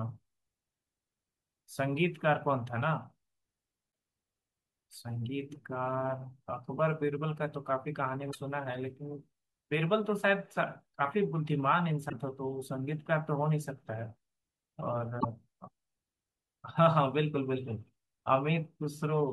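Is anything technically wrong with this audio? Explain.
Yes. This speech recording has damaged data in a compressed stream, heard four times: 3.88–3.91 s, 8.30–8.35 s, 12.06–12.13 s and 15.17–15.25 s. Each is a brief glitch lasting roughly 30 to 80 ms. Corrupted bytes make the decoder misread frames and lose sync until it locks onto the next valid frame header.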